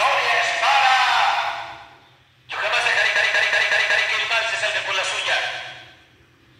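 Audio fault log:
3.16–4.09 s: system hang loop. A single 186 ms slice of audio repeats exactly five times at about 5.4 Hz, giving a machine-gun stutter. The host stalled while the output hardware kept replaying one ring buffer, which fits an 8192-sample buffer.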